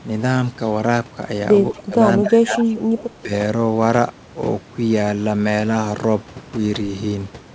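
From 1.71 to 1.96 s, 2.19 to 2.69 s and 3.15 to 3.31 s, the speech sags by about 15, 20 and 10 dB, most likely speech suppressed in double talk: the canceller couldn't separate this talker from loudspeaker echo, so it ducked everything. Right after, from 2.69 to 2.79 s, a faint copy trails 165 ms behind at about 20 dB down, likely an echo leak that slipped past the canceller.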